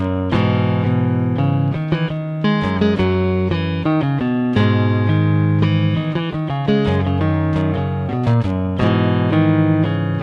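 No technical faults can be heard anywhere in the audio, and the signal comes through intact.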